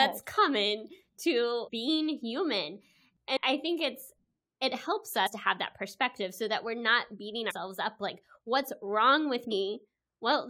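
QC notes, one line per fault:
0.37, 1.67, 3.36, 5.26, 7.50 and 9.50 s, compressed frames skipped. The speech jumps forward at each point, losing about 150 ms at four of them, roughly 300 ms at 3.36 s and about 70 ms at 5.26 s. The codec's frames are 21.3 ms long, and the jumps point to missing or rejected codec frames.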